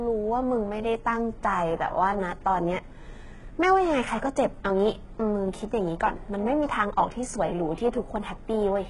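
Across the whole recording the speech has a gritty, metallic top end: s sounds come out lispy and smeared, and the brightness above the midrange sounds synthetic rather than natural, with nothing at all above about 11.3 kHz. This is heavy HE-AAC compression, likely at a very low bitrate, around 12 kbps. The codec stores only the lower spectrum and fakes the treble by copying lower bands upward, so those upper harmonics never match the real ones.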